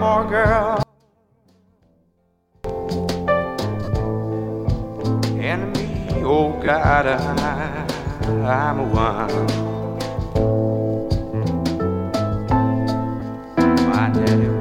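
From 0.83 to 2.64 s the sound collapses by about 37 dB into a faint residue, with the centre almost gone. The likely cause is one channel inverted: with one stereo side's polarity reversed, everything shared by both channels cancels on a mono sum, leaving only their small differences. On a waveform the envelope shrinks abruptly to a thin sliver. A spectrogram shows the whole band dimming.

Three short dropouts follow: 37.5 ms from 3.84 to 3.88 s, 22.5 ms from 6.66 to 6.68 s, and 15 ms at 13.20 s. These are lost LE Audio frames. Each gap's length fits a run of 7.5 ms LC3 frames. The decoder papers over missing frames by replaying the last spectrum with scrambled signs, so tones turn into a brief noisy smear. A spectrogram shows a short vertical band of diffuse noise replacing clean harmonic lines, and on the waveform each gap looks like a brief patch of hash.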